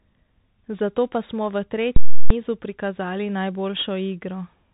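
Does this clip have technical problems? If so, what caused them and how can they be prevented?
Yes, two things going on. The whole speech clip has gone through a Bluetooth CVSD headset codec, and the damage is plainly audible. Nothing gets through above about 3.8 kHz, so the top end is simply gone. CVSD sends just one bit per sample, saying only whether the signal moves up or down, with a step size that keeps adapting. That fits a 64 kbps narrowband headset link, which can't follow fast high-frequency detail cleanly. To prevent it, record on a wired mic or a wideband Bluetooth profile rather than the headset's narrowband mode.

Then there's a block of invalid numbers at full scale, running from about 1.96 to 2.30 s, roughly 341 ms, which fits a 16384-sample processing block. Some calculation produced infinite or invalid values, and they got clamped to the largest positive or negative value, so the output just sits flat at one extreme, far beyond the speech peaks. 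You hear a very loud pop as it slams in, no sound through the middle, and another pop as it lets go. To prevent it, guard the processing chain against invalid values so they get caught and zeroed before they reach the output.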